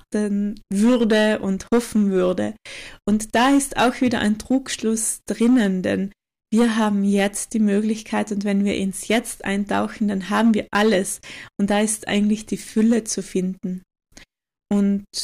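Crackle rides on the peaks of the speech from start to finish. This is hard clipping: the speech is pushed about 8 dB past what a stage can pass, so roughly three percent of samples are flattened, adding high harmonics.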